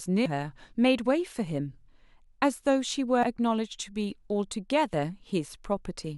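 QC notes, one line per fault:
0.26 s: compressed frames skipped, about two 92.9 ms frames, roughly 0.2 s of speech lost; the speech jumps ahead at the join rather than leaving a silent gap.
3.23 s: compressed frames skipped, a single 92.9 ms frame missing; the speech jumps ahead, unlike a dropout's silence.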